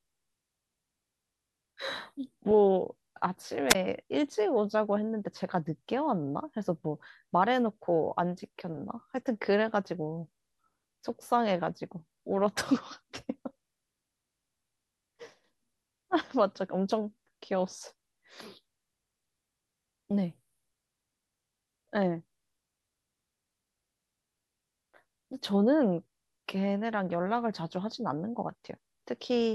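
At 3.69 to 3.75 s there's a wireless microphone squelch dropout: the radio link fades, hiss swells, then the receiver mutes the speech for about 16 ms.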